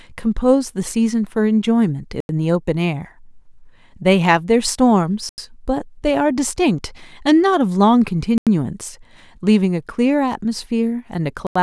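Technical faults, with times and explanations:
2.20–2.29 s, 5.29–5.38 s, 8.38–8.47 s and 11.47–11.56 s, gap between chunks: the speech stops dead for 88 ms four times, with 3.0 s of sound between holes. The audio was delivered in 3-second pieces and silence was inserted at each join, so nothing is missing but the flow is cut. The hard edges on each hole and the steady spacing are what separate this from a natural pause.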